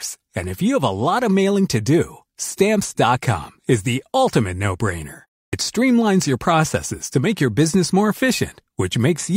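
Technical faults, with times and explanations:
5.48–5.53 s, clipped start after a pause: after "the ultimate no brainer" and a 0.3 s silence, the sound snaps in abruptly before "streamlines your processes to", with its first 50 ms missing. The output device went idle during the gap and swallowed the onset while waking.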